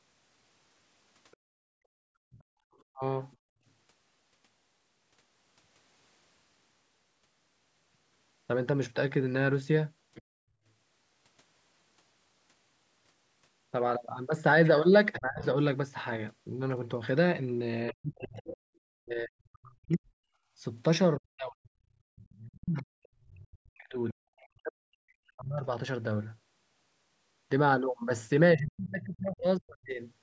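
Other side's voice leaking through, 1.31 to 3.36 s: a faint second voice sits well below the talker, likely loudspeaker playback the echo canceller failed to remove from the microphone.

Background gated by the echo canceller, 1.37 to 3.65 s: the room sound drops by up to about 32 dB, for roughly a second and a half in all, as the canceller clamps the microphone while the loudspeaker plays.

Speech suppressed in double talk, 2.92 to 3.03 s: the talker's voice dips very deeply for about a tenth of a second. The likely cause is the canceller mistaking both sides talking at once for echo and turning everything down.

At 10.15 to 10.22 s the other side's voice leaks through again, as a brief faint scrap.

From 15.13 to 18.57 s the leak returns, clearly louder this time, though still under the talker.

From 15.17 to 30.01 s the double-talk suppression returns. The talker's voice is pushed down very deeply, in pieces, adding up to around seven seconds.

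The canceller gates the background again at 22.02 to 22.16 s, dropping it by about 33 dB.

From 22.16 to 24.48 s the other side's voice leaks through once more at a low level.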